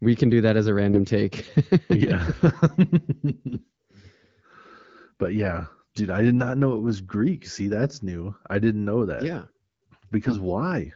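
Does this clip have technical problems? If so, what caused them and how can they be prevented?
Yes. AMR bit errors: on a weak link, the less protected bits of the AMR wideband frames arrived flipped while the checksum on the key bits still passed, so the decoder used them. Pulse positions and fine pitch, gain and spectral values came out wrong, turning the sound hoarse and gargly at 0.92 to 0.99 s and 10.26 to 10.36 s. Pitch and level hold roughly steady. These short bursts fit a few corrupted frames at error rates of several percent. Stronger channel coding or a better radio link prevents this.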